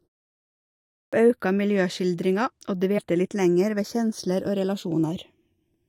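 A speech recording in which the opening sound after the initial silence begins abruptly at 1.02 s, its first 106 ms missing. This is a clipped start after a pause: following about a second of quiet, the output device likely needed time to wake and lock before passing audio, so the onset of "auka miljøskildringa og" was swallowed. Between "auka miljøskildringa og" and "litt lenger ved kjensler", at 2.97 to 2.99 s, there is a jump where about 70 ms of audio vanishes. These are compressed frames skipped, roughly three of them, either missing or rejected by the decoder. Throughout the clip, a mono sum has a slow, sweeping flanger colour, from channels drifting apart. The two sides run on clocks that disagree by around 100 ppm, so the inter-channel delay creeps to under half a millisecond, and the comb-filter notches glide through the spectrum as it grows.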